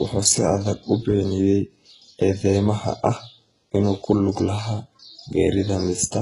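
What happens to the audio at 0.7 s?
At 0.7 s the speech carries the heavy damage of HE-AAC compression, which runs through the whole clip rather than starting there. The treble is likely rebuilt by spectral band replication: only the lower band is truly coded, and the upper band is patched in from copied lower content under a coarse envelope. Its harmonics don't align, so s sounds come out gritty and metallic, nothing reaches above 11.1 kHz, and the overall roughness fits a very low bitrate around 12 kbps.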